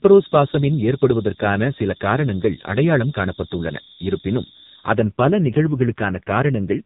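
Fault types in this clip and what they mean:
AMR narrowband mobile codec: Phone-band speech coding runs throughout. Nothing passes above 3.9 kHz, and the heavy damage suggests a low bitrate near 5.9 kbps, giving buzzy, synthetic speech.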